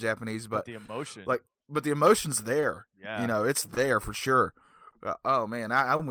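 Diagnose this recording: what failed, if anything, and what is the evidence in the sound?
The speech hangs briefly five times, a sound held too long before carrying on with nothing lost. This happens at 0.85–0.90 s, after "but but the"; 2.60–2.64 s, after "like but the emotion's"; 3.74–3.78 s; 4.90–4.94 s, after "for sure"; and 5.96–6.01 s. These are short stalls from a late packet, a network-stage fault. The jitter buffer ran empty, so the receiver stretched the last sound for 30, 20, 20, 20 and 30 ms until the packet arrived.

Those hiccups come back at uneven spacing across the whole clip, which points to clock drift between sender and receiver. The sender's clock runs roughly 2 percent slow, so the jitter buffer keeps draining and the receiver repeatedly has to hold sound while it waits.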